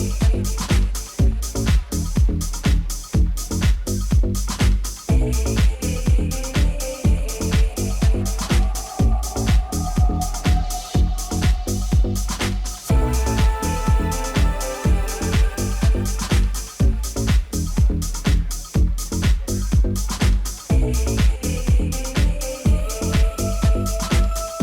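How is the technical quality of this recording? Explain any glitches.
The recording carries a persistent mains buzz. From 1.97 s to the end, a steady, raspy buzz sits roughly 40 dB below the signal. Sharp switching spikes from a dimmer, rectifier or unshielded line repeat twice per 60 Hz cycle, spraying harmonics up into the kilohertz range.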